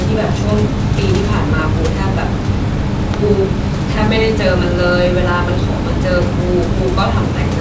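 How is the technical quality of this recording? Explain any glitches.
The technical quality of this recording is sound, with no glitches to explain.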